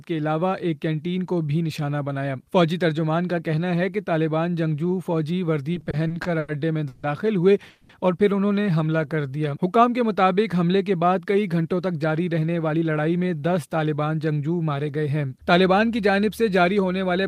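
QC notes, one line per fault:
5.73–6.50 s, repeated stalls (stutter): seven brief holds, together about 210 ms and the longest 90 ms, continue the last sound. The dragging stutter comes from many short gaps, not one long one.
6.88–7.05 s and 7.69–7.91 s, call audio freeze: the sound hangs as a fading buzz or hiss for 150 ms, then 200 ms, and resumes where it stopped. The likely cause is delayed packets emptying the jitter buffer. Each is a single hold, not a stutter.
8.62–9.34 s, jitter buffer slow-down: repeated pitch periods add about 96 ms, so the sound runs at 88% speed and keeps its pitch. It drags smoothly with no hold.
11.18–13.25 s, jitter buffer speed-up: removing short pitch-period pieces cuts around a fifth of a second. The sound runs at 111% speed and keeps its pitch, so it sounds hurried rather than broken up.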